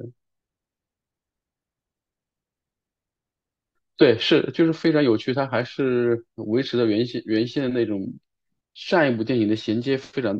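Nothing in the signal points to a technical fault, with the level, timing and continuity of the speech holding steady throughout.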